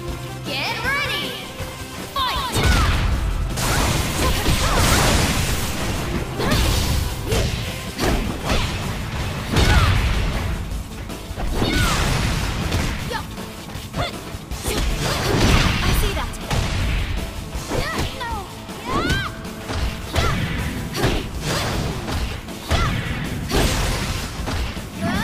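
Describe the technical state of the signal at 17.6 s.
At 17.6 s the signal is intact, with nothing audible there to point to a technical fault.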